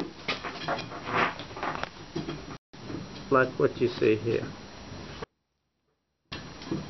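At 5.24 s there's an audio dropout to a faint residue: the sound cuts abruptly for about 1.08 s, leaving only a faint leak far below normal, likely a momentary signal loss.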